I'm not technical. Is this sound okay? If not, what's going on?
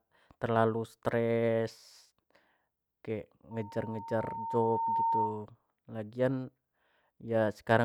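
No, not entirely. From about 3.51 to 5.46 seconds there is loudspeaker feedback squeal. A microphone is picking up the loudspeaker it is feeding, so the sound loops round and round, and one pitch, near 914 Hz, keeps reinforcing itself. You hear a steady tone that swells over roughly a second and a half into a piercing whistle. It ends up somewhat louder than the speech itself, then stops at about 5.46 seconds.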